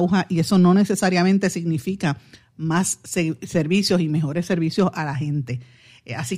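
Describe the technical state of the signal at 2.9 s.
At 2.9 s the signal is intact, with no audible fault at that point in the speech.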